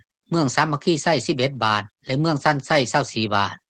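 No technical faults can be heard in this audio.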